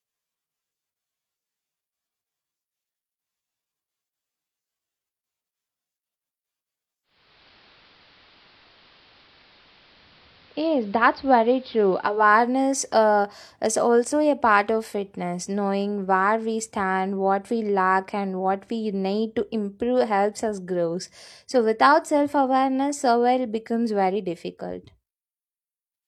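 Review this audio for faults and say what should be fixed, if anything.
Digital radio blending to analogue, 7.03 to 12.34 s: the receiver lost its digital signal and cross-faded over 434 ms to the AM broadcast. The speech dulls, and hiss rises to roughly 30 dB below, at unchanged level. Improve reception or disable analogue blending before recording.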